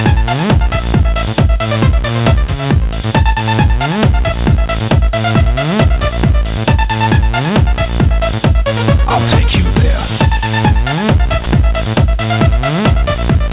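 At 11.44 s, a 20 ms slice is likely sound dropped by the voice detector. It is replaced by flat comfort noise, which shows as a brief low, even strip on the waveform and spectrogram.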